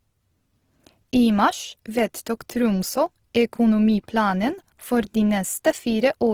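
Opus compression damage runs throughout the speech, with plainly audible roughness and a grainy, noisy texture. Content still reaches about 20.3 kHz. This likely comes from the codec's music mode at a low rate, near 16 kbps, filling starved bands with folded spectrum or noise.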